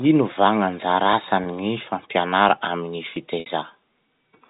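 A mismatch between two device clocks, likely off by around a thousand parts per million, lets the buffer between them drift until a small block of a few dozen samples is dropped or repeated. From 0.45 s to 3.84 s this produces a regular click roughly every 0.68 s, about seven in all, ticking through the speech at a steady pace regardless of what is being said.

At 1.44 s a single packet of 20 ms is lost, and the receiver bridges it through packet loss with pitch repetition, replaying the last pitch period. The result is a brief held, slightly buzzy moment lasting about 0.02 s. A longer loss at 3.40 s to 3.46 s covers 60 ms, which fits three consecutive packets. Here the repeated period fades toward silence before the speech returns through a short cross-fade, leaving an audible dip. Throughout, the G.711 A-law telephone coding keeps the band below 4 kHz.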